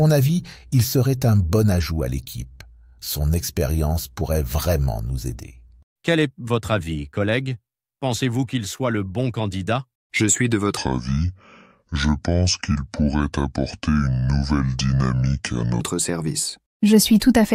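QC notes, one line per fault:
10.77–15.81 s, section at the wrong speed: the audio abruptly slows to about two-thirds of its proper rate (0.67x), so everything in this stretch drags and sits roughly seven semitones lower, then snaps back to normal at 15.81 s. This is likely from the section being played against the wrong clock. Pitch and tempo drop together by matching amounts, unlike a pitch shift or time-stretch, where only one of the two would change.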